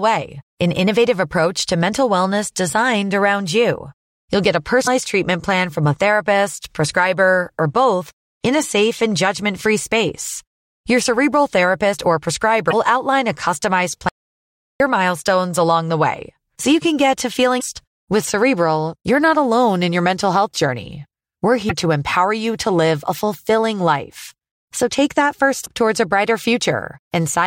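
Short chirps and blips break into the speech at 4.84–4.88, 12.69–12.74 (between "cerebral therapist or" and "outline a customized"), 17.58–17.63 (after "you can get to"), 21.66–21.71 and 25.62–25.67 s (after "take that"). Each is a sign of damaged data in the compressed stream, where the decoder misreads corrupted frames and resyncs. From 14.09 to 14.80 s the audio drops out to silence for about 0.72 s, with no room tone, likely from the input being lost while silence kept being written.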